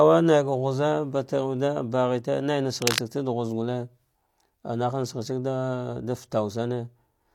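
From 2.81 to 2.99 s a harsh scratching burst, about as loud as the speech, is cable scratch noise, likely from a worn connector moving and its contact flickering.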